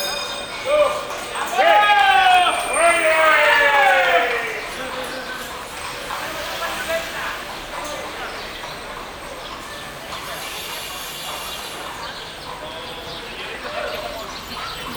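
GSM phone buzz, 9.70 to 10.60 s: the audio circuit rectifies a 2G phone's 217 Hz bursts, a steady raspy buzz about 24 dB down.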